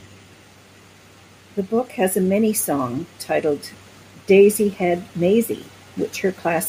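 No technical faults can be heard anywhere in the recording; the signal stays continuous and steady throughout.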